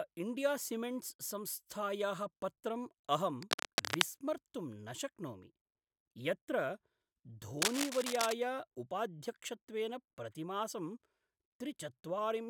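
From 3.42 to 4.02 s, just after "पत्रं अहं", and from 7.59 to 8.33 s, just before "उपाध्यक्षत्वेन प्रतिमासं", dense, uneven rustling roughly as loud as the speech covers it: cable scratch noise, likely a worn contact being moved. Unlike steady hiss or isolated clicks, it comes in irregular bursts.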